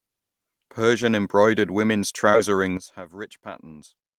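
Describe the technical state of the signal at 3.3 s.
At 3.3 s the signal sits inside a sudden gain jump, running from 2.77 s to the end, where speech and background noise together drop about 13 dB. It was likely caused by a gain change applied without a ramp. On the waveform the envelope steps down abruptly, and the spectrogram darkens evenly across all frequencies.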